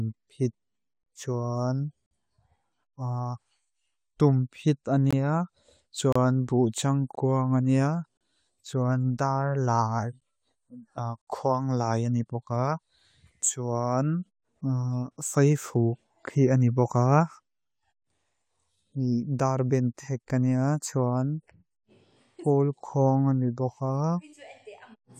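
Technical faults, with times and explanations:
1.03–1.06 s, 2.06–2.11 s, 5.11–5.13 s, 6.12–6.16 s, 7.15 s, 8.17–8.21 s, 10.20 s and 11.22–11.27 s: gaps between stream segments. The speech drops into clean, hard-edged silence for about 12 to 58 ms, landing near one-second boundaries, for example right after "bú cháng", just before "cháwan dár lái" and just before "kwang lái ányipoká". The segment timestamps don't quite meet, so the player pads the hole with silence. Nothing's lost, just pushed later.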